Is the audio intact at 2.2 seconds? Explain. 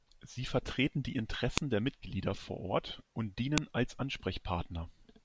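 Yes, the audio is intact at 2.2 seconds, with no audible fault at that moment.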